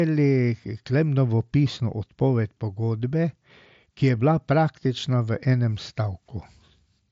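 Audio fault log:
No faults; the speech passes through an mSBC Bluetooth headset path, which accounts for the absence of content above about 7.7 kHz.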